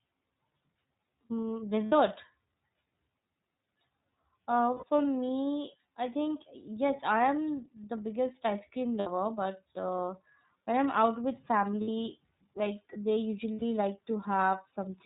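The whole speech clip goes through the iLBC codec with 30 ms frames, which cuts everything above 4 kHz and leaves a rough, synthetic edge. Lost iLBC frames come at 1.86, 4.74, 6.96 (after "me I think"), 8.99 (after "the biggest ice cream"), 11.81 (after "when I'm out with") and 13.53 s. Each gap, lasting 30 to 90 ms, is filled with a repeated pitch cycle that sounds like a short, buzzy held vowel, and the voice is right again almost at once.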